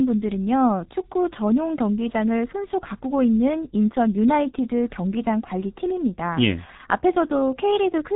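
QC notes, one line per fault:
Throughout: G.723.1 codec. The speech is dull and hoarse with smeared consonants, nothing above 3.8 kHz, and heavy coding damage. This fits a stream of about 6.3 kbit/s whose 30 ms frames update the voice model too slowly to follow quick articulation.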